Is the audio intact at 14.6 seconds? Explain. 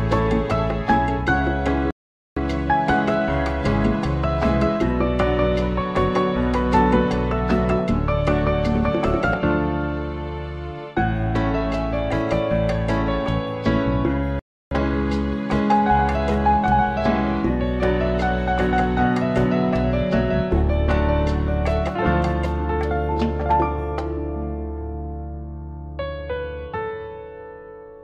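No, 14.6 s falls inside a rebuffering stall from 14.39 to 14.71 s. Playback ran dry and went silent, then picked up exactly where it stopped, adding 319 ms.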